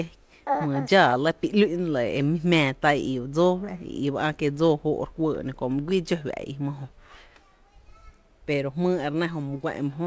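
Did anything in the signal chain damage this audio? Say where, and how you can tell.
No, nothing damaged it.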